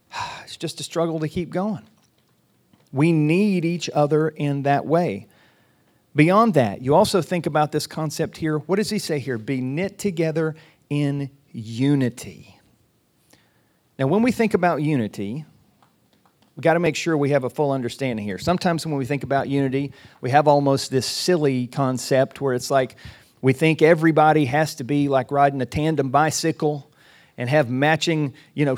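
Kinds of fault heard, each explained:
Repeated buffer: at 16.86 s, between "we've got to" and "sure we have a", the next chunk of audio didn't show up in time, so the playback side just played the last one again. That's a tiny slice, about 1.45 ms, which fits a 64-sample buffer, heard twice with a hard join. At that size you don't get a stutter, just a quick click, and nothing seems to go missing around it.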